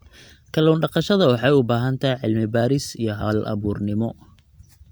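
Nothing in this speech recording jumps out as a technical fault; it just runs along without any glitches to point to.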